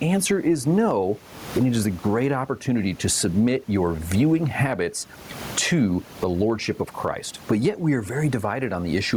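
Overdone noise removal runs through the whole clip. The noise reducer is set far too strong. It cuts single frequency bands whenever they sit near its noise estimate, taking quiet parts of the speech with them. The background drops and breaks up into twinkling specks.

Gain pumping is also present throughout, with a large gain swing of around 20 dB. Loud and soft parts sit close in level. The cause is likely input gain set far too high, with a fast limiter pulling it down on every peak. The room noise sits about 34 dB below the speech.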